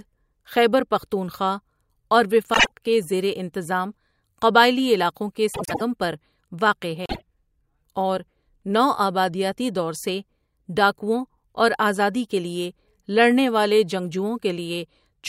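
At 2.54–2.71 s after "خیبر پختونخوا اور", 5.54–5.81 s after "انتظام قبائلی علاقوں کے", and 7.05–7.22 s after "پر واقع", the speech has frames out of order. Adjacent blocks of about 48 ms, and 96 ms in the second event, swap places, giving a garbled flutter and no lost time.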